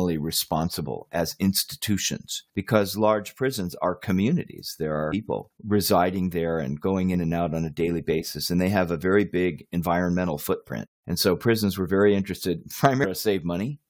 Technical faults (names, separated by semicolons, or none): damaged data in a compressed stream